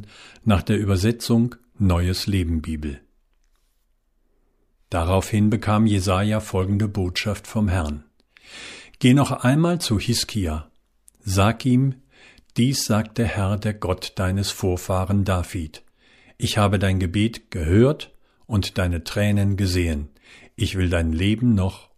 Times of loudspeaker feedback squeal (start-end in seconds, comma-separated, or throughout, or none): none